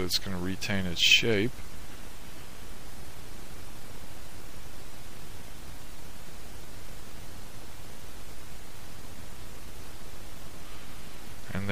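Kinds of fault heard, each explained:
MP3 compression: plainly audible watery, swirling artefacts throughout, likely from an MP3 encoder short of bits, discarding weak spectral detail, consistent with roughly 64 kbps.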